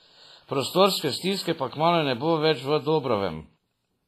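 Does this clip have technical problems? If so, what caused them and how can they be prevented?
Yes. Throughout the speech the sound rings and turns washy, with a hiss that swells and fades along with the signal and nothing above 15.4 kHz. This is likely WMA compression at heavy settings, which fits a bitrate near 24 kbps. Its long transform blocks smear quantisation noise over tens of milliseconds, and weak spectral lines are dropped. Noise-reduction artefacts would instead leave warbling tones in quiet gaps, whereas this hiss tracks the signal itself. Prevent it by encoding at a higher bitrate or keeping a lossless master.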